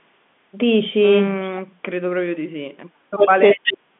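From 3.12 to 3.36 s the speech dips by around 35 dB, likely speech suppressed in double talk, the echo canceller attenuating the talker while the far side is active. At 3.51 to 3.72 s a likely echo leak returns a copy delayed by 373 ms, only about 5 dB under the speech. From 3.53 s to the end, likely suppression cuts the speech again, by roughly 40 dB, within the 150 Hz to 3.5 kHz telephone band.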